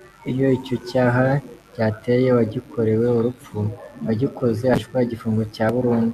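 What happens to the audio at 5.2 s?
At 5.2 s there's a short burst of damaged data in a compressed stream: a quick glitch in the speech, lasting only about 14 ms. A bit of the encoded stream got corrupted there, so the decoder couldn't read those frames properly, lost its place, and had to hunt for the next valid frame header before it could carry on. That's why you hear a brief glitch instead of clean audio.

Under that, the mains buzz that runs through the whole clip is still there at 5.2 s. It's a steady, raspy 50 Hz buzz sitting roughly 35 dB below the speech. It comes from sharp switching spikes, from something like a dimmer, a rectifier or a missing shield, getting into the signal twice every mains cycle. Those spikes fill in a whole ladder of harmonics, which is what gives it that gritty edge rather than a pure hum.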